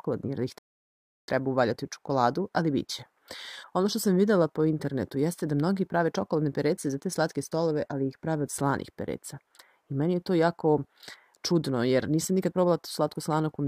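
Right near the start there's a rebuffering stall: at 0.58 s the sound drops to dead silence and sits there until 1.28 s, then picks up exactly where it left off. So nothing's actually missing, you just get about 0.7 s of extra time wedged in. That's the player running dry on downloaded audio and waiting for the next chunk to land before carrying on, so it's a delivery hiccup rather than anything wrong with the recording itself.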